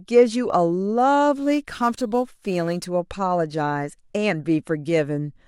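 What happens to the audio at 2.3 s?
A gritty, inharmonic fizz rides on the speech from 1.36 to 2.86 s: crude rate conversion, samples dropped unfiltered, which fits a 48 kHz to 44.1 kHz change.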